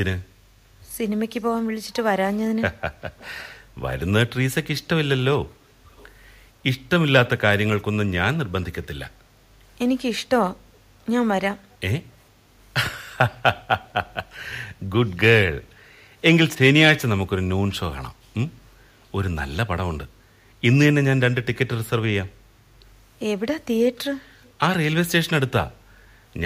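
An echo canceller on a loudspeaker end is likely letting part of its microphone pickup through, so the speech returns as an echo leak delayed by 463 ms. Faint scraps of that delayed copy surface at 3.18–3.48 s and 5.88–6.10 s, about 30 dB below the speech, then more weakly at 13.84–13.88 s and 24.44–24.52 s, around 35 to 40 dB down. Each is a brief ghostly trace trailing the voice.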